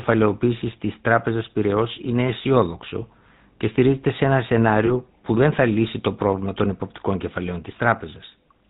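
Throughout, the speech has a buzzy, gravelly roughness and a dull top end. This is GSM full-rate codec damage: the voice is rebuilt from a vocal-tract model driven by sparse, regularly spaced pulses, nothing above 4 kHz survives, and the coarseness fits a 13 kbps channel.

From 4.86 to 4.90 s, between "και στηρίζεται σε ένα" and "που δεν θα λύσει", the sound briefly turns to a rough, metallic ring. These are lost GSM frames: the decoder filled the gap by repeating the last good frame, which fits a single missing 20 ms frame.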